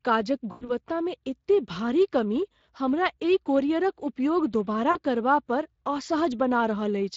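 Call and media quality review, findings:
Speex codec damage throughout the speech: hoarse, noisy excitation, audible from start to end. Probable component: the Speex encoder, in a mode of about 20 kbps. Unlike packet loss, it is constant rather than bursty, with no dropouts.

VoIP packet loss concealed by the speech codec at 0.51–0.72 s: the sound smears into a fading extrapolation and stays weak briefly after. Fits about five 20 ms frames regenerated by the decoder. Not a hard dropout.

Second concealment event at 4.91–4.99 s: a shorter smear and fade, consistent with about two lost frames. Distinct from codec coarseness because it is localised and tails off gradually.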